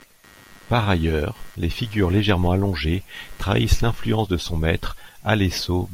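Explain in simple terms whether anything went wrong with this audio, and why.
From the start to about 4.16 s there is computer activity noise: a faint buzzing, pulsing roughly a hundred times a second, well below the speech. The computer's changing workload disturbed the shared ground of the audio circuit, so the buzz follows the machine, not the speech.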